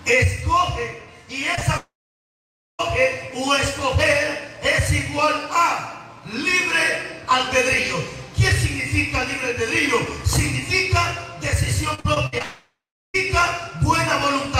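At 1.55 s and again at 1.59 s, there is short concealed packet loss. Two back-to-back holes of about 20 ms each run from 1.55 to 1.63 s. The receiver bridges each one by extending the sound just before it, then blends back into the real signal. The result is a brief smear or wobble, and a very short sound inside that window may drop out.

From 1.77 to 2.81 s comes a long network dropout, likely from a stall in delivery. About 1.02 s of audio never plays. The receiver stretches the last sound into a fading buzz or hiss, and then roughly 0.88 s of near silence follows. When the sound returns, it picks up further along, with the missing stretch gone.

Between 11.95 and 12.42 s there is repeated packet loss, which gives a robotic sound. Six separate holes fall in under half a second, the longest about 59 ms. Around 37 percent of that span is patched rather than real. Each patch barely finishes before the next gap arrives. 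The sound turns choppy, with pieces missing.

Right after this, from 12.42 to 13.16 s, a second long network dropout follows. About 0.72 s of audio is lost. A fading continuation of the last sound covers part of the gap, and then about 0.37 s of silence remains. Playback resumes past the missing portion.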